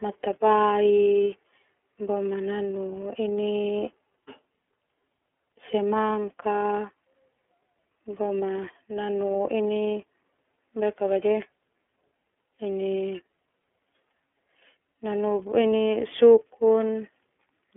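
From start to finish the speech carries iLBC codec damage. Band-limited to telephone range, nothing above 3.7 kHz survives. Thirty-millisecond frames coded independently leave it rough and synthetic.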